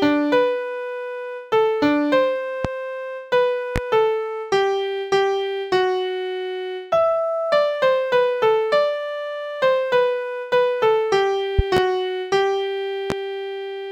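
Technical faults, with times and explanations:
2.65–2.68 s, 3.76–3.79 s, 11.59–11.80 s and 13.10–13.14 s, loud pop: sharp single pops about 15 dB above the sound, with a quick double pop at 11.59 s, while the sound carries on beneath. Each is likely a brief voltage pulse from a switch, plug or static discharge entering the signal path.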